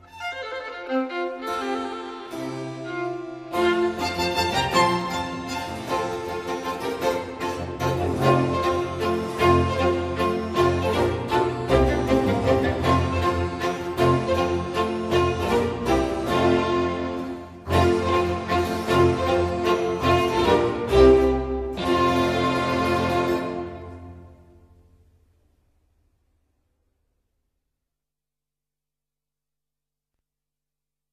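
Nothing here stands out as a technical fault at any point in the recording.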